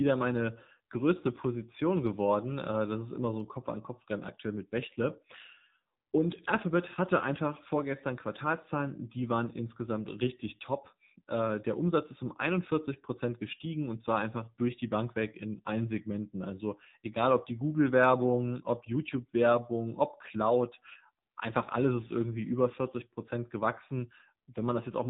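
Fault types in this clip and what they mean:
AMR narrowband mobile codec: buzzy, synthetic-sounding speech with nothing above 4 kHz, which fits AMR-NB mobile coding at a low rate around 7.4 kbps.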